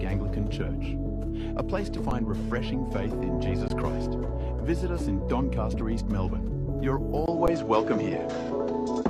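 The audio breaks up three times with an underrun with held sample: at 2.10 s and 7.47 s the waveform freezes flat for 10.67 ms, which fits a 512-sample buffer, and at 3.68 s for about 20 ms. Each time the output buffer ran dry, the converter held its last value, and roughly 10 or 20 ms of audio is skipped. At 6.69–6.72 s a brief glitch marks damaged data in a compressed stream, where the decoder misreads corrupted frames and jumps to the next good frame header. From 7.26 s to the end the sound turns duller after a 20 ms silence. Nothing is present above 7.4 kHz, the level shifts by roughly 5 dB, and a new noise floor sits around 40 dB below the signal. The likely cause is the input switching to a poorer device.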